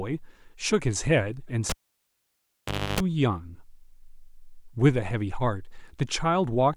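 At 1.70 s the speech is cut by a cable pulled and plugged in: a pop as the live connection breaks, then about 1.26 s of near silence. While only the plug tip touches, roughly 0.3 s of 50 Hz mains buzz leaks in, and a second pop at 3.00 s brings the speech back. On a spectrogram, vertical broadband lines mark the pops, with a dark gap between them, interrupted by a 50 Hz harmonic ladder.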